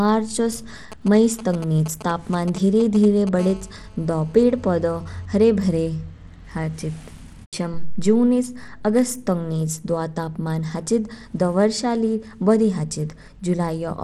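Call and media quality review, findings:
Bluetooth SBC compression, whole clip: gritty, coarse texture on the speech and an unsteady top end, nothing at all above 18.8 kHz. Likely SBC with a tight bit pool, in line with roughly 96 kbps: the weak upper sub-bands get starved of bits and the rest are quantised roughly, so the treble flickers and grainy noise and aliasing sit on top. Damage is plainly audible.

GSM signalling bursts, 0.92 to 3.29 s: galloping dit-dit-dit ticks and short buzzy chirps, something like 15 dB under the speech. Points to a 2G phone nearby doing its pre-call or pre-message signalling, sending short groups of radio bursts at a 217 Hz rate that the audio circuitry rectifies into clicks.

GSM phone buzz, 3.39 to 5.26 s: hard, raspy, harmonic-rich buzz locked at 217 Hz, about 25 dB below the speech and unrelated to it. A nearby 2G handset, now in a call and transmitting bursts 217 times a second without letup, so the rectified burst train comes through as a steady buzz for that stretch instead of the galloping pattern.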